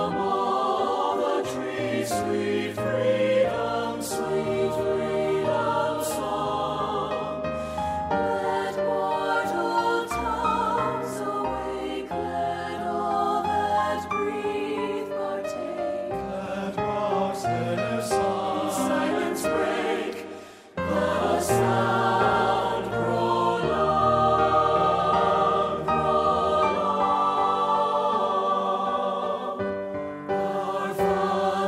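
Nothing is technically wrong with the clip.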